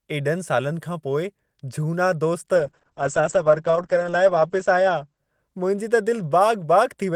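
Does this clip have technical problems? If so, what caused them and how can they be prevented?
Yes. From 2.56 to 6.25 s there is a call bitrate drop. The call's bandwidth estimate fell, forcing the encoder to code far more coarsely. That fits a fall from 32 to 9 kbps. For about 1.87 s at the worst point, the speech turns rough and watery, and the top end is cut off above 8 kHz instead of reaching 20 kHz. A more stable network link and conservative congestion control that avoids sharp bitrate cuts would prevent this.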